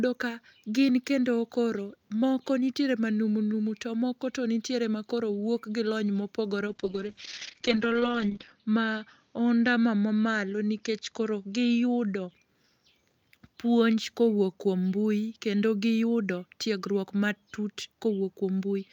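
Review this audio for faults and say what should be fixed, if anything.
A call bitrate drop runs from 6.68 to 12.37 s, just after "lony mopogore": the encoder falls from 64 to 8 kbps, bandwidth narrowing from 20 kHz to 8 kHz, so the speech turns muffled and rough. Adding bandwidth headroom or smoother rate adaptation on the link would prevent such a steep cut.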